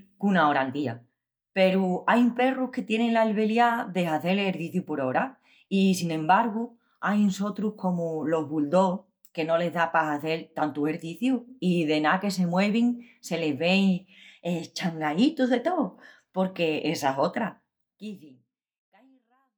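No technical faults are audible.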